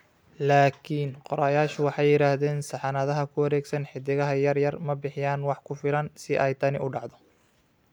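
Speech recording, with no audible technical fault anywhere in it.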